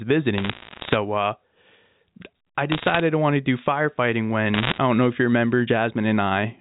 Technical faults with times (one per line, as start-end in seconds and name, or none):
0.38-0.96 bit errors on a digital phone line
2.72-3.00 bit errors on a digital phone line
4.54-4.78 bit errors on a digital phone line